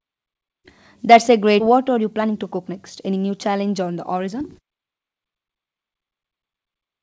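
Speech over a call path, where nothing above 8 kHz survives, which fits the wideband G.722 codec. At 1.60 to 1.62 s there is a skip ahead. Around 0.7 s of audio is gone. Playback jumps forward with no filled gap, so the two sides join almost directly. Either the audio was lost in transit or an overflowing jitter buffer dropped it while later audio waited. From 1.70 to 4.62 s comes a jitter buffer speed-up. The speech runs at 112 percent of normal speed, but the pitch stays the same. It sounds hurried. The buffer had built up too much delay, so it trimmed short pitch-period pieces over and over, removing roughly 0.4 s in total.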